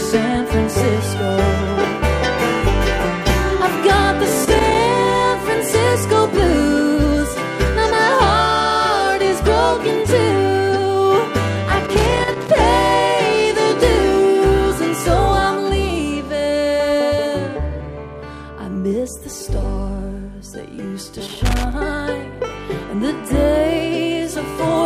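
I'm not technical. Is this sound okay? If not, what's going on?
No. There's loose connector crackle: short bursts of irregular scratching at 4.32–4.75 s, 11.85–12.57 s and 21.27–21.74 s. A worn or dirty plug contact keeps cutting the signal on and off as it shifts, which chops up the sound.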